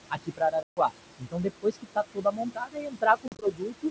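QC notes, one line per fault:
throughout: noise suppressor artifacts. The suppressor pulls down every band it judges to be steady noise, frame by frame, by up to about 22 dB. The room noise, about 12 dB under the speech, sinks in pauses and swells beneath speech.
0.09–0.92 s and 1.18–3.91 s: speech cut by the noise suppressor. The suppressor misreads quieter speech as noise and turns it down with the background, by up to about 22 dB. Roughly half a second in the first span and about two seconds in the second sound swallowed or faint.
0.63–0.79 s and 3.28–3.47 s: packet loss on an ADPCM call. About 140 ms drops out as one hard-edged hole, which points to around fifteen lost packets. Later, 80 ms goes missing in gaps of up to 40 ms spread over 140 ms. Each time the decoder's predictor and step size fall out of step, so the speech returns with brief distortion.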